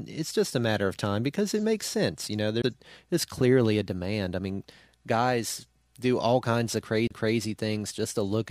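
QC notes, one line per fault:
2.62 to 2.64 s, CD skip: there's a little tick and a very short drop-out, about 15 ms, then the speech carries on from a different spot. The laser lost its track and landed on another turn of the disc's spiral, so the player muted briefly and resumed one or more turns away, which is why it jumps rather than just clicking.
7.07 to 7.11 s, CD skip: same thing again, with a somewhat longer mute of a few hundredths of a second before the speech picks up out of place. Another jump to a different turn of the spiral, heard as a tick and a sudden displacement in the speech.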